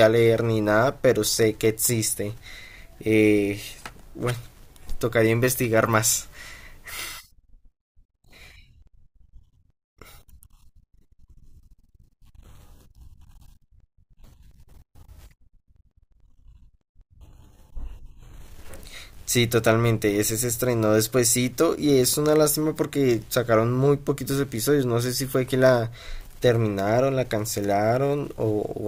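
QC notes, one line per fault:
No fault found.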